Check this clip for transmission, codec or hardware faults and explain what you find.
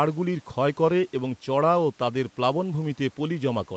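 Nothing wrong turns up here: the speech comes across the way a normal call should, with the top end stopping around 8 kHz and the usual codec texture, and no transmission, codec or hardware faults to point to.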